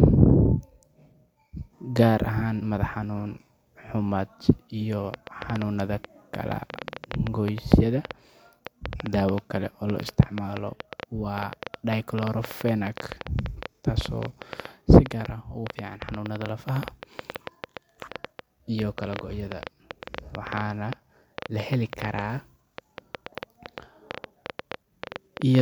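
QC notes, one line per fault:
5.14–25.60 s: train of clicks, roughly 150 uneven pulses at about 7.7 per second, well above the speech and audible in pauses; likely interference or a faulty connection.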